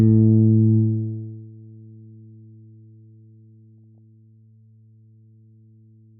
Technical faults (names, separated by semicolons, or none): DAB burbling